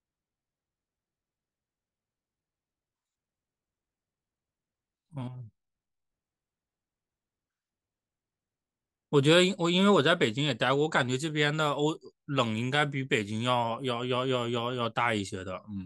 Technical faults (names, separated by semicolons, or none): none